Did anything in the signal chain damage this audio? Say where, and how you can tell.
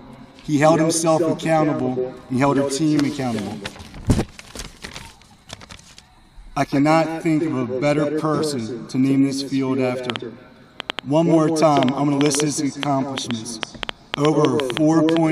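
Yes. From 10.10 s to 15.18 s a train of clicks, around thirty similar pulses at about 5 per second with uneven spacing, ticks over the sound, peaking roughly 20 dB above it. This likely comes from interference in the analogue wiring or a struggling interface injecting pulses.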